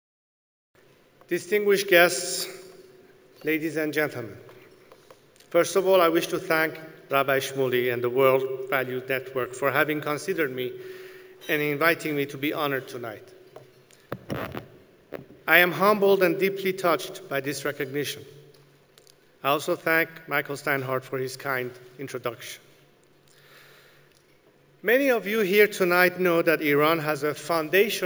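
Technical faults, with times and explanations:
Throughout, imaging from sample-and-hold upsampling: each sample was simply repeated to raise the rate, which fits a 16 kHz original, so a mirrored copy of the band sits from 8 to 16 kHz at about -18 dB, heard as a metallic fizz tracking the sound's level.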